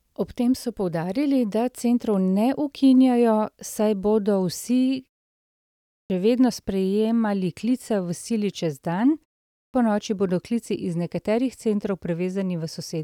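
At 5.86 s and again at 9.53 s, speech resumes with a clipped start after a pause: the output path, idle through 0.85 s and 0.36 s of silence, needs time to wake, so the first 240 ms and 210 ms are swallowed and the sound cuts in abruptly.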